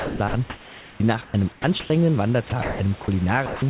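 From 0.0 to 1.9 s the speech is chopped, most likely by the sender's voice detector switching on and off. About 1.1 s of sound in total is swapped for comfort noise, so syllable edges vanish. The real room hiss sits about 24 dB below the speech. The same chopping happens again from 2.5 to 3.08 s, with about 0.24 s replaced. The switching is what sets this apart from a single dropout.

From 3.46 to 3.62 s the sound is dropped, likely because the voice detector mistook quiet sound for background. About 0.13 s of real sound is lost, and 0.16 s of steady comfort noise plays in its place. Unlike the chopping, this is one gap with no flicker, and it ends only when the detector triggers again. Throughout the clip there is nothing above 4 kHz, which fits a narrowband G.711 call codec.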